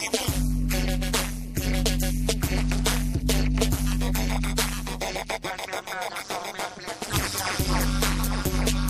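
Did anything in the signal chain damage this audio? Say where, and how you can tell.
Yes, overlap-add ripple throughout: a metallic buzz with extra tones around each note, rippling at around 200 Hz, about 60 dB deep, from frame-based processing whose resynthesis windows don't sum to constant gain.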